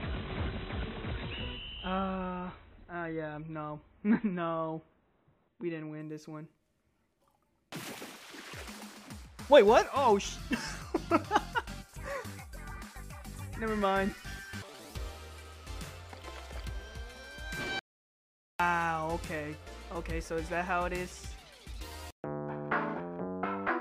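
For the first 6 s, the adaptive stream is starting at a low bitrate. The player begins on a cheap version to start quickly. Nothing above 4.1 kHz comes through, and codec artefacts are stronger, which fits a 24 kbit/s MP3. At 6.0 s the quality jumps with no gap, sounding like a 128 kbit/s version.

At 17.79 s an audio dropout to silence begins. It lasts until 18.60 s, about 0.8 s. The sound cuts off abruptly and the gap is silent, with no room tone. The likely cause is a lost input while silence kept being written. Whatever played then is gone.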